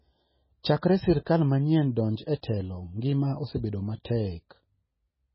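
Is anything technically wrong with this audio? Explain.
Yes. Throughout the speech there is nothing above 5.6 kHz, and the sound is watery and swirly, with smeared onsets. This is likely MP3 compression at a very low bitrate, around 16 kbps. The encoder discards the treble and switches weak frequency lines on and off between frames.

Pre-echo occurs at 1.25 s, just before "manyien donj e telo", at 2.42 s, right after "manyien donj e", and at 4.04 s. A short hiss of about 12 to 15 ms precedes each sharp onset, which sounds softened. The coding noise is spread across the block and fills the quiet gap ahead of the attack.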